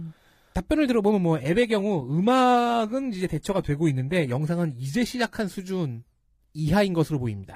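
From 1.36 to 5.36 s, an adaptive stream at a lower bitrate: the speech abruptly loses its top end, with nothing above 14.9 kHz, consistent with HE-AAC near 20 kbit/s, with no gap.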